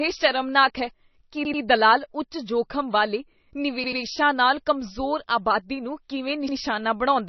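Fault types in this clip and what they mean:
MP3 compression: the audio sounds watery and swirly with nothing above 6 kHz, likely from heavy MP3 encoding at a very low bitrate, around 26 kbps.
Repeated buffer: an 85 ms slice plays three times with hard joins, a stutter after "ਸ਼ਰਮਨਾਕ ਹੈ ਕੀ" and before "ਨਾਲ ਕਮਜ਼ੋਰ", fitting a 4096-sample buffer.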